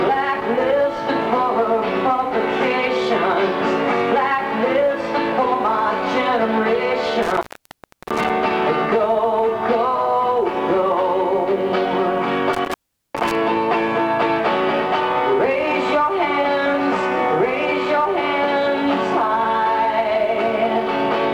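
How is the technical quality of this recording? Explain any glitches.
Two glitches mar the recording, both from an intermittent contact. From 7.23 to 8.30 s, and again from 12.53 to 13.35 s, the sound crackles, drops to faint hiss for about 0.69 s and then 0.41 s, and crackles back. A loose plug or cable is briefly breaking the signal path.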